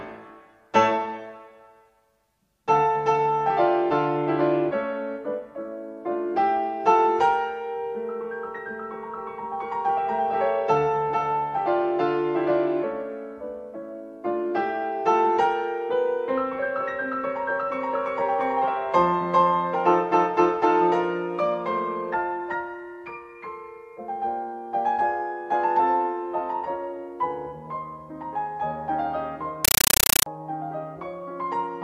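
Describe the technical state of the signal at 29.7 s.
At 29.7 s the signal is a compressed stream played as audio, running from 29.65 s to 30.26 s. A Dolby Digital (AC-3) bitstream, consistent with a 384 kbps stream, is being passed to the output as if it were ordinary PCM samples instead of being decoded. Each coded frame comes out as an 8 ms burst of noise followed by zero padding, repeating at 31.25 Hz. The result is very loud, chattering static replacing the intended sound.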